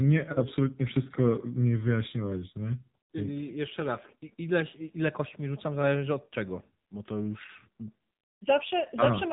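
AMR narrowband mobile codec damage runs through the whole of this speech clip, from start to finish. Nothing above about 3.8 kHz survives, so the voice is boxed into a telephone band with no air or sibilant detail. The vocal-tract model rebuilds each 5 ms from a handful of excitation pulses, and at this coarseness the voice comes out plainly buzzy and synthetic, which fits the low 7.4 kbps mode of AMR-NB.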